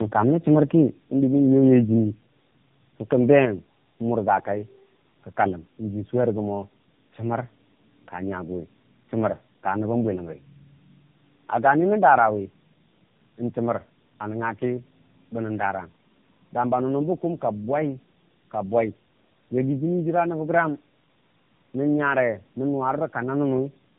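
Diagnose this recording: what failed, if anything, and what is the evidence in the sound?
The failure is tandem speech coding at the codec stage, present throughout. The speech is rough, muffled and warbly, with nothing above 3.7 kHz. This fits two low-rate coders in a row, likely a G.729-type then AMR-NB, the second re-encoding the first's already degraded output.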